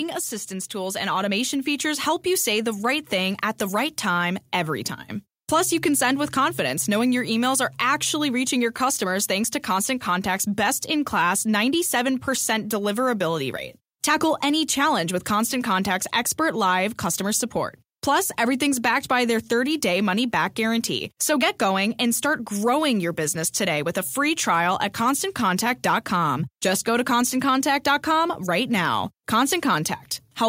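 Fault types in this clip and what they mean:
Automatic gain rising: The gain control judged the input too quiet and raised its level slowly rather than at once. From 0.48 s to 2.92 s the speech climbs by about 5 dB. The background noise climbs with it, so the whole sound swells together. Only the level grows, and it takes over two seconds to settle. That slow, shared swell is the sign of the control adjusting itself.
DC step: The zero line of the waveform suddenly jumps to a new offset. It is the sort of jump a converter recalibrating or an offset input being switched in would produce. Here it happens twice, at 9.44 s and at 27.22 s. Each jump is heard as a low thump or click. The speech carries on unchanged through it. The offset does not hold. A 5 Hz high-pass pulls it back to zero within a fraction of a second.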